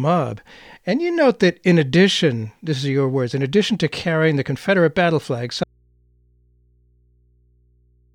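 At 5.64 s, just after "battle flag", the incoming signal was likely lost while the path downstream stayed live, an audio dropout to a faint residue. The speech cuts off abruptly, leaving only low hum about 40 dB down through to the end.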